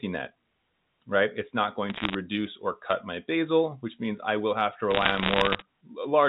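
Bit errors on a digital phone line crackle through the speech from 1.9 to 2.15 s and 4.91 to 5.62 s, each flipped bit changing a single sample, and hits on high bits making sharp ticks.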